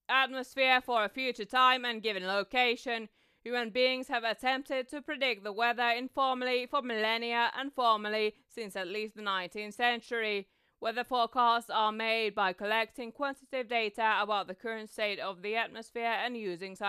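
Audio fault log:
Nothing to log here; the speech comes through without any fault worth noting.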